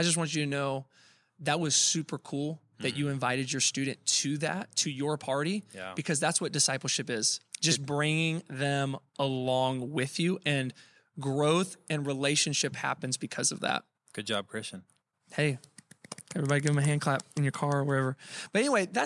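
Nothing goes wrong anywhere in this bit of speech, so there's no fault to point to at any moment.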